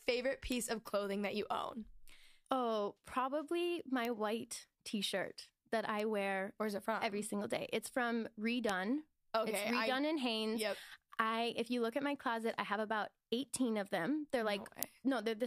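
Bit error spikes in the speech at 0.52, 4.05, 6.00, 8.69 and 14.83 s: flipped bits jump one to three samples to about -17 dBFS, about -24 dBFS at 6.00 s and about -5 dBFS at 14.83 s, giving sharp broadband ticks.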